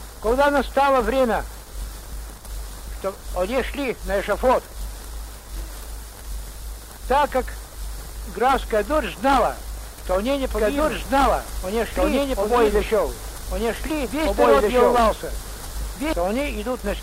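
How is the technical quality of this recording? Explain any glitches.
The recording has one clear glitch, a doubled audio track, from 10.51 s to 16.13 s. A second copy of the sound sits on top of the original, running about two seconds behind it at roughly the same level, so the two streams overlap and compete. The copy is full-band, with no reverb tail or room colour, and it cuts in and out abruptly. The likely cause is the signal being captured twice, once through a slower path, or an edit leaving two misaligned copies in the mix.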